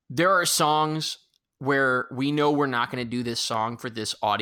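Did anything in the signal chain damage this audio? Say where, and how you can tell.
Yes. Sharp single clicks at 2.38 s, after "are songs where we", and 3.54 s, after "going to do this", are dropped samples, likely lost at the driver or buffer stage. A fraction of a millisecond vanishes, so the waveform jumps. Unlike a dropout, no audible gap follows.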